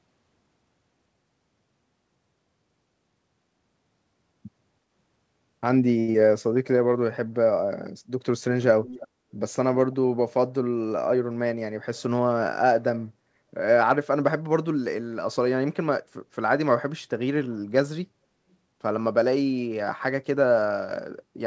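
Short stall from a late packet, 6.00 to 6.10 s: a packet arrived after its due time, so the jitter buffer ran dry. The receiver held the last sound for 79 ms until the packet turned up, then resumed exactly where it had paused. Nothing is lost, but the playout delay grows by 79 ms. The sound is stretched unnaturally long, with a faint buzzy or sagging quality as the held segment repeats.

Short concealed packet loss, 6.12 to 6.16 s: about 60 ms of speech reached the decoder too late to use. The receiver covered 24 ms of that gap by extending the preceding sound, continuing its pitch if voiced or shaped noise if not, then crossfaded back into real audio. The playout delay shrinks by roughly 40 ms. The result is a brief smear or wobble, and any short consonant in that spot may disappear.

Jitter buffer slow-down, 6.49 to 6.77 s: the buffer's reserve was low, so the receiver rebuilt it by repeating single pitch periods or bits of pause many times in a row. 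In total, 41 ms was added, and playback runs at 88% speed. Pitch stays the same, but syllables drag and there may be a slight warble.

Echo leak, 8.84 to 9.07 s: a faint delayed copy of the speech comes back 319 ms after the original, about 20 dB below it. The likely cause is that the far end was playing the call over a loudspeaker and its echo canceller failed to remove everything its microphone picked up, so the residue was sent back. It sounds like a repeat trailing the speech.

Jitter buffer speed-up, 11.14 to 12.09 s: the buffer was holding more audio than its target, so the receiver cut short pieces of one or a few pitch periods, again and again, to bring the delay down. Roughly a tenth of a second is removed over this stretch, and playback runs at 108% speed. Pitch is unchanged, but the speech sounds slightly hurried and compressed.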